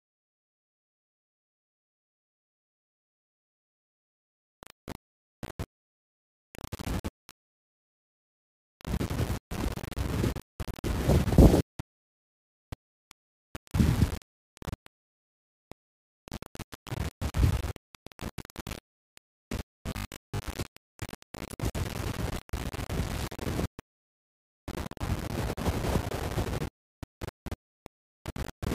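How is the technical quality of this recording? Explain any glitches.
The technical quality is poor. Two faults are audible: grainy distortion throughout and a short robotic buzz near the 20-second mark.

Throughout the recording, the sound has a coarse, grainy distortion that rises and falls with the signal rather than sitting beneath it as a steady hiss. Quiet passages crumble or sputter toward silence. The likely cause is low bit depth without dither. The audio appears to have been rounded to only about 5 bits, leaving an error roughly 10 dB below the signal. Because that error tracks the waveform, it sounds like distortion instead of broadband noise, which is what separates it from ordinary background hiss.

From 19.66 to 20.48 s, the sound turns into a rigid, metallic buzz fixed at 50 Hz. It roughly follows the contour of the audio. This is likely robotic sound from repeated short buffers. 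A chunk of about 20 ms is replayed over and over while most of the real audio in that stretch is skipped. The 50 Hz buzz is one over that 20 ms length. The locked, steady pitch distinguishes it from the grain heard throughout, which has no fixed tone and changes with the sound.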